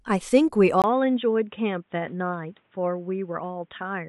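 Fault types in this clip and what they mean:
input switched to a poorer device: a 20 ms gap at 0.82 s, likely a device change; afterwards the spectrogram is empty above 3.8 kHz and the waveform shrinks.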